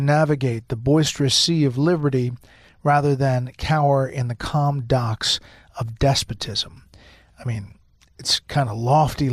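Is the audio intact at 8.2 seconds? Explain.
Yes, the speech at 8.2 seconds plays through intact, with no audible fault at that moment.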